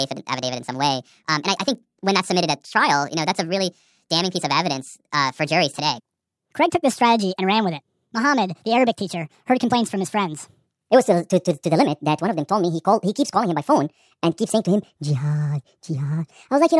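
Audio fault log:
Throughout: wrong sample rate. The speech runs 1.5 times too fast and sits about 7 semitones high, so everything sounds chipmunky and rushed. Speed and pitch rising together like that fits 16 kHz audio played back at 24 kHz with no conversion.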